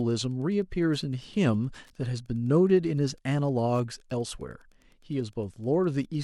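In this speech recording, a nearby Wi-Fi radio's beacon, every 102.4 ms, is being rectified by the audio circuit. Wi-Fi interference adds a faint, steady ticking about ten times a second throughout, well below the speech.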